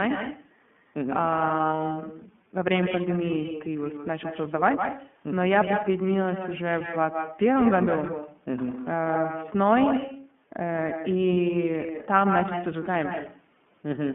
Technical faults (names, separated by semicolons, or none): echo with no canceller; iLBC codec; lost iLBC frames